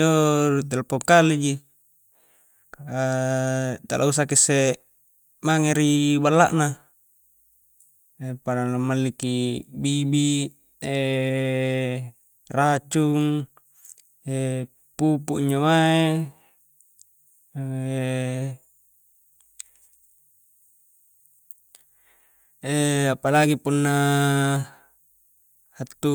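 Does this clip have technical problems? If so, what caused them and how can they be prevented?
No, nothing in this speech recording stood out as a technical problem on listening, so there is nothing here that needs preventing.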